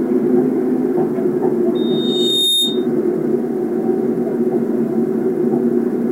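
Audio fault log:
1.75–2.87 s, loudspeaker feedback squeal: a pure 3.7 kHz tone swells over most of a second until it matches the level of the surrounding sound, because the microphone hears its own loudspeaker and loop gain above one at that frequency keeps reinforcing itself.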